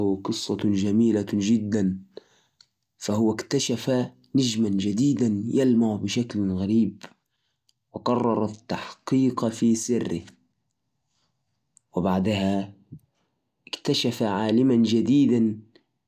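Speech, with no technical faults.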